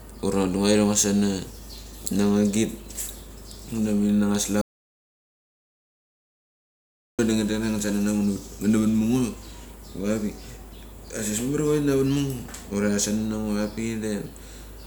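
The input was likely lost for a moment, through a disconnected device or a stray mute, while recording carried on writing silence. The result is an audio dropout to silence from 4.61 to 7.19 s: speech cuts off abruptly, about 2.6 s vanish into dead silence without room tone, then resumes mid-flow.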